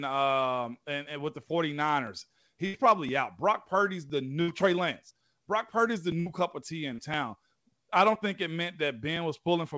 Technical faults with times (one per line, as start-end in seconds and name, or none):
1.07-9.16 periodic USB or driver dropouts
2.66-2.75 burst of packet loss
4.41-4.50 burst of packet loss
6.20-6.28 burst of packet loss
6.94-7.00 short concealed packet loss